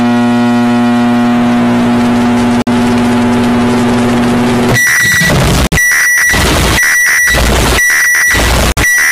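The audio has a gap between chunks: 50 ms holes at 2.62–2.67, 5.67–5.72 and 8.72–8.77 s, spaced about 3 s apart. This fits audio delivered in 3-second chunks with silence inserted at each join. Unlike a dropout, nothing is lost; the sound simply resumes where it paused.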